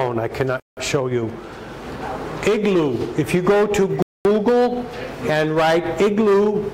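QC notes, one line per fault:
0.60 to 0.77 s and 4.02 to 4.25 s, Bluetooth stall. The sound drops to silence for 172 ms, then 227 ms, and resumes. The likely cause is radio interference delaying packets, so the headphone buffer empties and playback waits for resent data.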